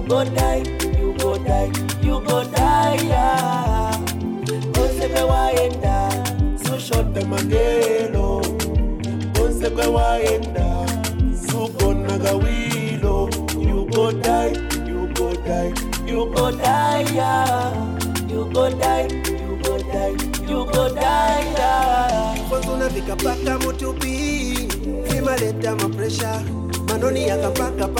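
From 7.08 s to 16.35 s there is a section at the wrong speed. For these nine seconds the audio runs at about 0.89 times its proper rate, so everything is slowed and drops in pitch by roughly two semitones, sounding heavier and more drawn out. The shift is abrupt at both boundaries. The likely cause is playback or editing against a mismatched clock for that segment.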